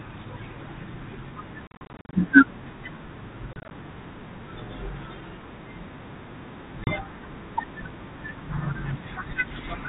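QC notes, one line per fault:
1.67–2.19 s: packet loss on an ADPCM call. About 270 ms of speech drops out in hard-edged silent holes spread over 460 ms. The longest hole is 40 ms, and roughly thirty packets are gone. After each hole, the decoder's predictor and step size no longer match the sender's. The speech comes back slightly distorted, then settles within tens of milliseconds.
3.53–3.71 s: packet loss on an ADPCM call. About 90 ms is lost over 180 ms in holes of up to 30 ms, around ten packets. Each gap is followed by the same mistracked, slightly distorted recovery.
6.84–6.94 s: packet loss on an ADPCM call. There is one 30 ms hole, a few packets, with slightly distorted speech on recovery.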